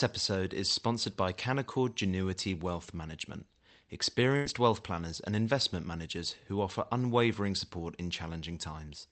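A burst of packet loss hits at 4.36 s and lasts until 4.46 s. A short run of the call's audio packets never arrived in time, so the receiver filled about 90 ms by stretching the last sound it had and letting it fade, heard as a brief held, dwindling smear in the speech. When the stream picks up again, roughly 90 ms of the original is simply gone. The call codec's band limit near 8 kHz applies throughout.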